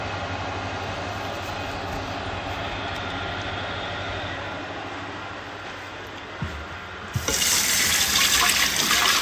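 No technical faults can be heard anywhere in this recording of sounds. Nothing in it points to a problem at any moment, so there is nothing to place in time.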